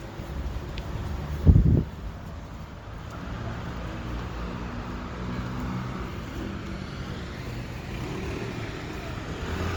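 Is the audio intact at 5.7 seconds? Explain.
No. At 5.7 seconds you're hearing generation loss, which runs through the whole clip rather than hitting just that moment. The sound has that swirly, hollow, smeared quality, and transients come out blunted. It's likely from the audio being decoded and re-encoded around seven times, in a way that fits Opus at roughly 64 kbit/s. Each pass quantises on a shifted frame grid, so noise piles up beyond what that bitrate would explain on its own.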